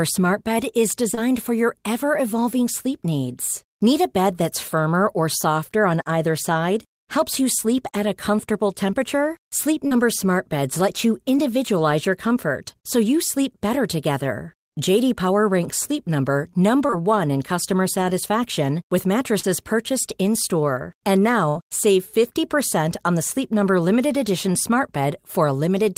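A speech recording with two kinds of network damage. Short concealed packet loss appears at 1.11 and 1.15 s, just before "for your ever evolving", then at 9.87 s, 11.37 s, 16.87 and 16.91 s before "in customer satisfaction with", and at 19.40 s right after "in customer satisfaction with". Each time, 20 to 40 ms of audio failed to arrive in time. The decoder extended the preceding sound, pitched or noise-like, then crossfaded back. The result is a quick smear or wobble. At 11.37 and 16.87 s, a little extra time is also inserted. A burst of packet loss follows at 21.49 to 21.57 s. About 60 ms went missing in a row. The receiver held the last sound and faded it down, giving a brief buzz or hiss. Speech then resumes slightly later, with that stretch gone.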